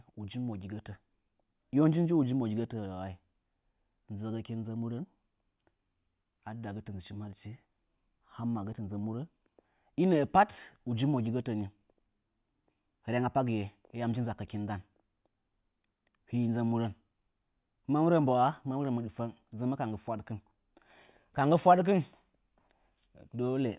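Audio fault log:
Listening to the recording from beginning to end, nothing stood out.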